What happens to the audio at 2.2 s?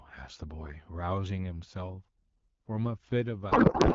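Nothing goes wrong at 2.2 s: the speech carries on intact through that moment, with only the light coloration of the AMR wideband (HD Voice) codec at 12.65 kbit/s.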